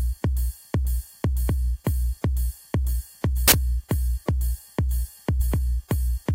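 At 3.48 to 3.52 s, a hard-edged burst of very loud white noise cuts in: file tags played as audio, where embedded cover-picture data is decoded as samples. Unlike a click or dropout, it is flat, very loud static with abrupt edges, not a transient or a gap.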